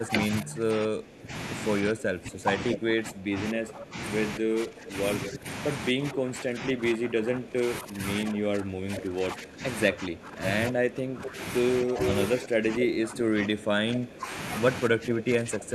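From the start to 14.31 s, the speech keeps dipping, by up to about 15 dB, for roughly ten seconds in all. This is speech suppressed in double talk. Both ends were likely talking at once, and the echo canceller turned down the near talker along with the echo.

At 5.22 to 5.32 s and 11.24 to 11.29 s, a delayed copy of the speech appears, about 10 dB below it. From 12.06 to 12.45 s it returns louder, about 5 dB down. Each copy lags by about 0.24 s. This is echo leak. A speakerphone's canceller likely let part of its loudspeaker pickup through, and it was sent back.

From 14.89 s to the end, the speech drops again by up to about 15 dB, for roughly 0.7 s. It is the same suppression in double talk, again likely from both sides speaking together.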